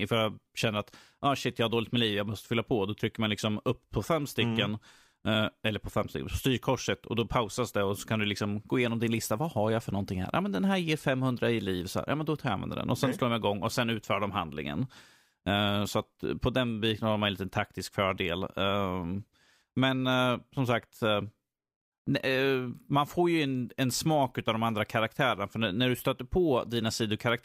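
From 0.35 s to 27.4 s, faint clock slip clicks tick through the speech about every 0.4 s. Each is a one-sample step in the waveform and a thin, evenly spaced vertical line on a spectrogram, likely from unsynchronised clocks drifting about 50 ppm apart.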